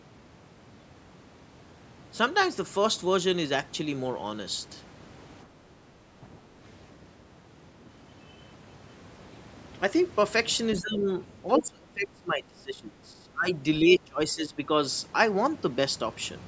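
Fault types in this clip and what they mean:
Speech suppressed in double talk: The speech dips in four places, at 5.85 to 6.24 s, 10.8 to 11.09 s, 11.58 to 13.48 s and 13.8 to 14.59 s. The drops range from a shallow dip of about 10 dB to a deep one of about 25 dB, and the longest spans roughly two seconds after 11.58 s. This is likely an echo canceller that, with both ends talking at once, could not tell the near talker from loudspeaker echo and turned the speech down along with it.
Other side's voice leaking through: A brief fragment of a second voice appears at about 11.6 s, lasting only a few hundredths of a second and sitting only about 5 dB below the main speech. It appears just as the long suppressed stretch begins. The likely cause is far-end audio from the talker's loudspeaker that reached the microphone and slipped past the echo canceller without being fully removed.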